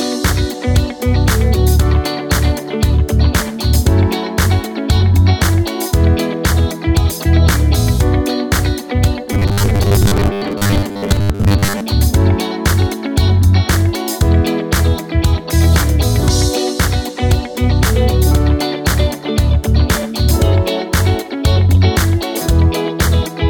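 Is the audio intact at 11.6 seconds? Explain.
No, at 11.6 s you're inside a stretch of robotic sound from repeated short buffers, running from about 9.33 to 11.83 s. It's likely caused by audio arriving too seldom, so roughly half the time a 10 ms chunk gets replayed, forcing a rigid 100 Hz metallic buzz.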